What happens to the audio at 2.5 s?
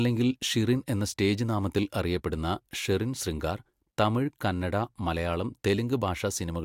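Nothing goes wrong at 2.5 s; the speech runs through that moment intact, with no dropout, glitch or distortion.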